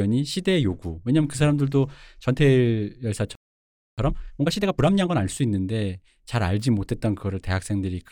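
A speech recording whose flow breaks off abruptly at 3.35 s and falls completely silent for about 0.63 s, resuming at 3.98 s exactly where it left off. This gap is a playback stall, most likely the player's buffer running dry or its output thread being held up, so nothing reached the output until data arrived again. Straight after the gap, from 3.98 s to 5.22 s, the speech comes out noticeably rushed, at roughly 1.5 times normal speed, yet the pitch stays natural. That is time-compressed catch-up: to shed the backlog built up during the stall, the player trims out short slices of audio and cross-fades the remaining pieces together, which shortens the material without raising the pitch.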